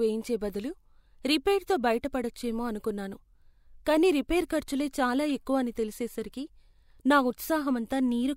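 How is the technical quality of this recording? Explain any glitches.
One brief glitch mars the speech. At 5.30 s, between "కానీ రిపేర్ ఖర్చులే చాలా" and "ఎక్కువ అని తెలిసేసరికి", a corrupt frame decoded. Damaged bits, across roughly two frames, misplaced energy, giving a brief glitch peaking around -30 dBFS.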